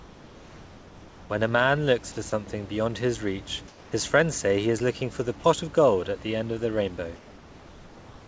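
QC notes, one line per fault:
0.0–1.30 s, 3.68–3.92 s, 7.16–8.28 s: comfort noise in place of the background. Before "a man looks for", between "beyond his reach" and "friends say he is", and at the end, the room background gives way to a smooth, featureless hiss about 2 to 4 dB quieter. This is likely discontinuous transmission, with the receiver synthesising noise during the pauses. Unlike real room noise, which sits about 23 dB under the speech, it has no texture and switches at the speech edges.
2.30–2.32 s: sound dropped by the voice detector. Between "a man looks for" and "beyond his reach", about 10 ms of real sound is swapped for a brief patch of steady noise, likely because the detector mistook the sound for background. Unlike a packet-loss gap, it is filled with noise rather than silence or a repeat. The sound returns once the detector retriggers.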